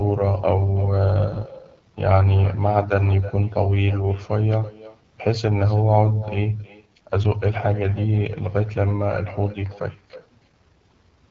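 From start to finish, every phrase is trailed by an echo with no canceller: a thin copy about 19 dB down, arriving roughly 300 ms late. It is a distinct, delayed repeat, unlike reverberation's smooth tail, because the far end's loudspeaker feeds its microphone and nothing removes the return.

The whole clip also carries AMR wideband (HD Voice) codec damage that is plainly audible as a steady rough, raspy texture, which points to one of the lowest AMR-WB modes, near 8.85 kbit/s. It keeps the wider band to about 7 kHz, unlike narrowband telephone audio, and it is continuous rather than the brief dropouts of packet loss.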